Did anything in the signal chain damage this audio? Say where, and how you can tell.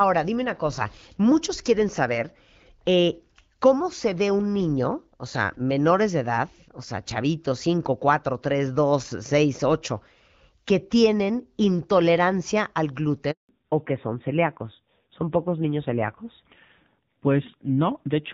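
Yes. At the network stage there is a handover gap from 13.31 to 13.49 s. While the call switched networks, no speech frames arrived for 180 ms. The audio dies away within a few tens of milliseconds and stays silent until the new link starts carrying sound.

At the codec stage a fallback to narrowband begins at 13.49 s and runs to the end. Before that point the light HD Voice coding fits AMR-WB at 12.65 kbit/s. After it, nothing above 4 kHz remains and the speech turns duller and rougher, which points to AMR-NB around 7.4 kbit/s.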